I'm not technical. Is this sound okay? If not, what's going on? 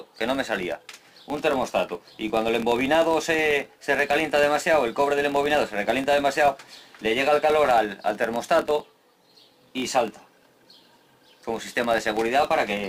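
No. All the way through there is a steady ticking buzz, about 43 times a second, that grows louder and quieter with the sound. This is a filter restarted on every block: it forgets its state at each block, which fits 1024-sample blocks, so every block begins with a small click.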